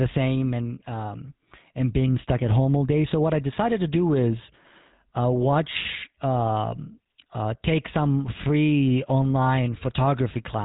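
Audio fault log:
throughout GSM full-rate codec: speech has a plainly buzzy, gravelly roughness from pulse-driven vocal-tract coding, consistent with a 13 kbps full-rate stream. A spectrogram shows a hard ceiling at 3.9 kHz with nothing above, and smeared, comb-like harmonics below it.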